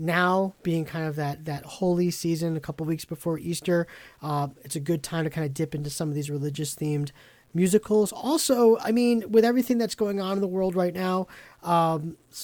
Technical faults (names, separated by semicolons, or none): low bit depth without dither